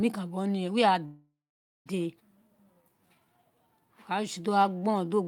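Speech plays normally until 1.05 s, where it suddenly hangs: the last sound carries on as a fading buzzy tail and then drops to about half a second of silence before the talker resumes at 1.88 s, exactly where they left off. This is a call audio freeze, and the cause is likely a stall in packet delivery that drained the jitter buffer, so the receiver stretched the final sound and then went quiet for roughly 0.8 s in all. Nothing is lost, but the delay grows by that amount. Soon after, between 2.20 and 2.22 s, the speech lurches forward with almost no gap, and about half a second of it is simply gone, the two sides butted together. This is a skip ahead: with later packets already queued, a chunk was discarded, which wipes out most of the delay the freeze had added. From 2.39 s to 5.25 s the talker sounds slightly slowed, drawn out at an unchanged pitch, running at about 88% speed. This is a jitter buffer slow-down. 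Running low on its reserve, the buffer refills it by repeating single pitch periods and slivers of pauses over and over, and in doing so it inserts 357 ms across that stretch.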